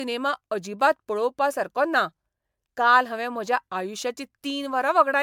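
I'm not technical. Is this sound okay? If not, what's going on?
No. The speech has generation loss from start to finish: it sounds swirly, hollow and smeared, and the starts of sounds lose their crispness. The likely cause is the recording being saved as an MP3, reopened and saved again about ten times, with each save adding fresh damage on top of the last. A single save at low quality sounds dull but steady; this repeated damage gives the extra watery, hollow swirl.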